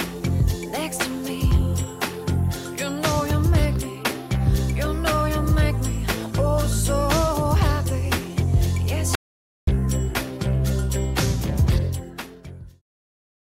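At 9.15 s an audio dropout to silence cuts the sound for 0.52 s, until 9.67 s. It's likely a lost input writing silence, showing as a flat, empty gap.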